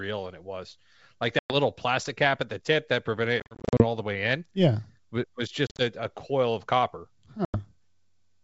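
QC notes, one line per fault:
1.39–1.54 s, 3.40–3.85 s, 5.67–5.82 s and 7.45–7.59 s, packet loss on an ADPCM call: hard-edged holes in the speech, roughly 110 ms missing at the first and 90 ms at the last, while the middle two are choppy bursts of short gaps (250 ms lost over 400 ms, then 100 ms over 120 ms). After each hole the decoder's predictor and step size no longer match the sender's, so the speech comes back with a bit of distortion before it settles.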